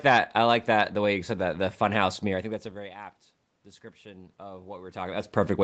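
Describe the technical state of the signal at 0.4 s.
At 0.4 s the audio is intact, with no fault at that moment.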